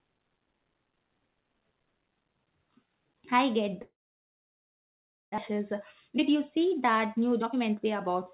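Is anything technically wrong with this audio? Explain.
Yes, there are two problems, both on what sounds like a narrowband phone-style path, with nothing above 4 kHz, consistent with G.711 mu-law.

From 3.82 to 5.40 s, right after "I get", there's a long network dropout, likely from packets failing to arrive. The receiver stretches the last bit of sound into a buzzy tail that fades fast, then there's about 1.4 s of near silence. When the audio returns, roughly a second of speech is simply gone.

From 5.52 to 8.32 s you get a jitter buffer speed-up. After the gap, the buffer was holding around half a second more than it wanted, so the receiver kept snipping out tiny pitch-period chunks to catch up, dropping around 0.4 s in total. Playback runs about 14% fast while the pitch stays the same, so the speech sounds rushed to the end.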